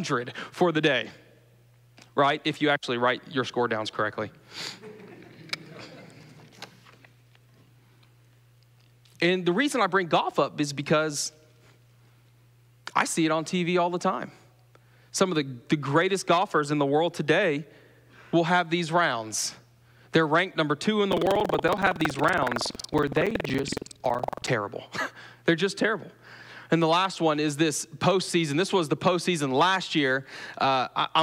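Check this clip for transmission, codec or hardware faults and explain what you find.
One fault is present: buffer tearing, from 21.08 to 24.51 s. The software filling the playback ring buffer and the hardware draining it have drifted out of step, so their positions cross within every period. A slice of each buffer, roughly 15 percent, still holds audio from the previous lap, around a fifth of a second stale, spliced in with hard edges. The result is a rattling, robotic buzz at 21.5 Hz, which fits a 2048-sample buffer, audible only where there is signal.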